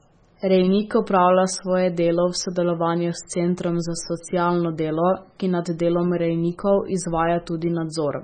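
From the first second to the end, the speech has a hard ceiling at 9 kHz with nothing above it, and the remaining detail sounds watery and swirly, with s sounds turning metallic and chirpy and consonant attacks smeared. That's most likely heavy MP3 compression: the encoder ran so short of bits that it chopped the treble and kept switching weak frequency lines on and off frame to frame, which fits a very low bitrate, somewhere under 20 kbps.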